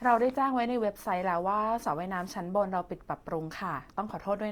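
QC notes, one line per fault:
Throughout, Opus compression: speech sounds rough and grainy, with noisy highs extending to 20.2 kHz, likely from a low-rate Opus music-mode encode near 24 kbps.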